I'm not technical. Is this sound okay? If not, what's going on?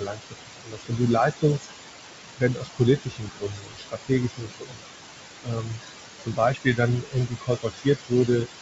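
No. Noise suppressor artifacts run through the whole clip. A filter pushes down the loud room noise between phrases, so the noise sinks between phrases and rises again under the voice.

Speech cut by the noise suppressor happens at 0.0–1.0, 1.31–1.68, 2.37–2.81, 2.97–4.11, 4.29–4.84, 5.43–5.82, 6.18–6.80 and 7.01–8.48 seconds. The filter took soft parts of speech for noise and lowered them, so they sound swallowed.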